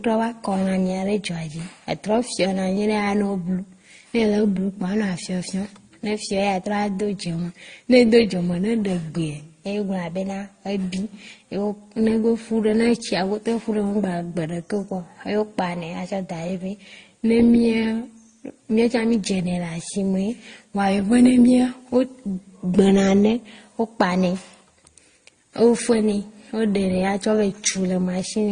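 Transcoding between lossy codecs runs throughout the speech: nothing survives above 9.7 kHz, and stacked, mismatched compression artefacts point to low-bitrate MP3, Opus, then AAC-LC, likely re-encoded successively.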